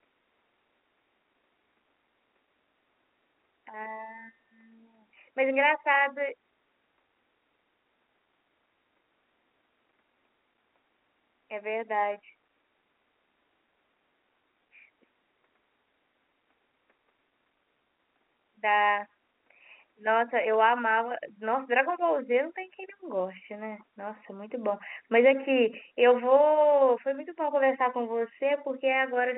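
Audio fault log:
Nothing stood out on listening to this speech, which carries the narrow band of a G.711 telephone line over a very low room-noise floor.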